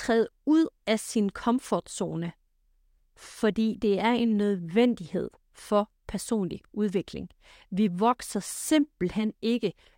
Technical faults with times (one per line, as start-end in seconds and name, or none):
none